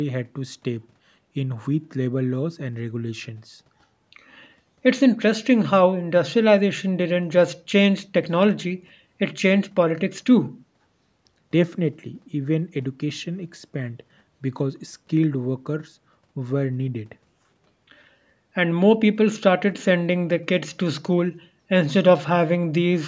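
Nothing is technically wrong with this speech clip; it has only the normal band limit of call microphone processing, with nothing above 8 kHz.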